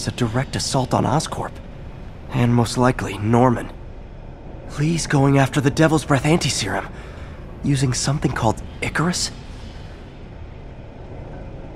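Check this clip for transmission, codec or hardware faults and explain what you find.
Nothing stood out on listening to this recording.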